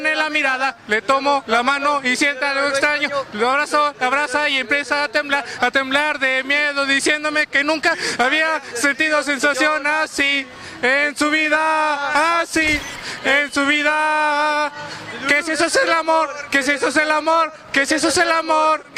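Nothing in the audio stood out as a problem on listening.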